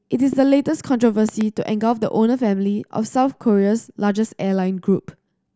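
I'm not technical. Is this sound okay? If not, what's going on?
No. The speech has two loud pops. The first is a single pop from 0.33 to 0.35 s. The second, from 1.29 to 1.43 s, is a quick double pop and is noticeably louder. Each is a sudden electrical jolt, likely from a plug, a switch or static. The talking carries on underneath without a break, which sets these apart from a dropout, where the sound itself cuts out.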